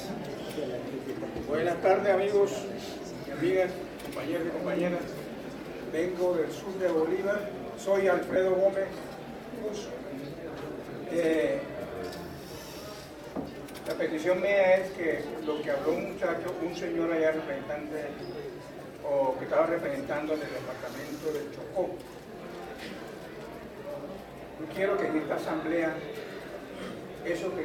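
At 5.05 to 5.08 s and again at 8.34 to 8.36 s, lost LE Audio frames leave brief gaps of about 22.5 ms each, consistent with three 7.5 ms LC3 frames. The decoder fills each gap by repeating the previous spectrum with randomised phase, so tonal content briefly becomes a short noisy smear.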